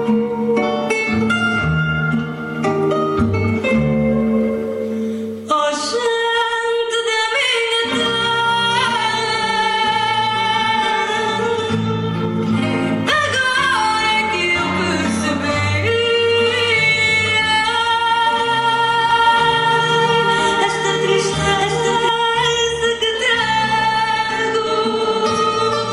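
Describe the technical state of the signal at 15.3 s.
At 15.3 s the signal is intact, with no audible fault at that moment.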